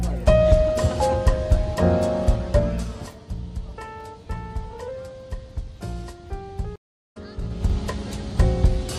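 At 6.76 s the audio drops out into about 0.34 s of silence and comes back at 7.17 s, but not where it left off. It picks up roughly a third of a second further on, so a short stretch of material is simply missing. This is a stream reconnect. The connection broke, the player went quiet, then rejoined the live stream and started a fresh decoder at the current point rather than the lost one. Right after that, from 7.37 s to 7.77 s, a fast ticking zip rides on the sound while the level changes by around 15 dB. That is zipper noise. The gain was moved in bare 3 dB jumps, about ten a second, with no smoothing between them, and each jump leaves a small click in the waveform.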